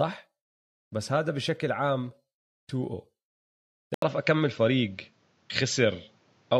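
At 3.94 s, an 80 ms silence gives way to duller speech with nothing above 7.6 kHz, likely an input switched to a poorer device. The spectrogram's top band vanishes there.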